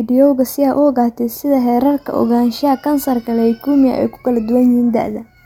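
Nothing goes wrong anywhere in this bit of speech, so there's no technical fault to point to.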